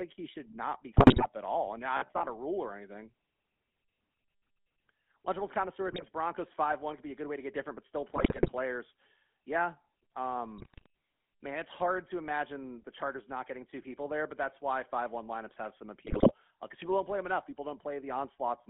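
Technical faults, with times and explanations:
Throughout, GSM full-rate codec: the sound has a buzzy, gravelly roughness and a narrow band of about 200 Hz to 3.5 kHz. The sound fits 13 kbps GSM full rate, which models the vocal tract and drives it with sparse, regularly spaced pulses.
0.92–1.26 s, 5.88–6.09 s, 8.16–8.49 s, 10.58–10.86 s and 16.06–16.33 s, GSM bit errors: brief bursts of squawks, pops and gargling. Corrupted bits in the decoder's filter, pitch and gain values warp the spectrum and make the level jump from frame to frame.
1.97–2.32 s, robotic sound from repeated short buffers: a rigid, metallic buzz near 67 Hz that still loosely follows the sound. The likely cause is starved playback repeating the last 15 ms or so while a large part of the real audio is skipped.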